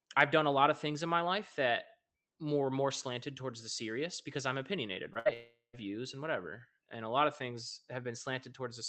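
At 5.13 s, just after "serious because I'm opinionated", a short concealed packet loss occurs: about 20 ms of the call stream failed to reach the decoder in time, and the receiver bridged the hole by extending the preceding sound for roughly 16 ms before blending back into real audio. Through this Opus path, band-limited at 8 kHz, it comes across as a tiny smear or wobble where the sound briefly loses its edge.

Almost immediately, from 5.19 to 5.27 s, a burst of packet loss follows. Around 60 ms of consecutive audio never arrived, so the decoder synthesized about 63 ms of continuation from the last received sound and lowered its level as the gap lengthened. The result is a short held, fading buzz or hiss, after which the audio picks up further along with that stretch gone.

From 5.33 to 5.75 s, leading into "views and whatever", roughly 0.4 s of audio is replaced. The last sound stretches into a decaying buzz or hiss that thins out, and about the final 130 ms is silence before the audio resumes with the missing portion skipped. 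This is likely a long network dropout, where nothing reached the receiver for several tenths of a second and concealment ran out before packets resumed.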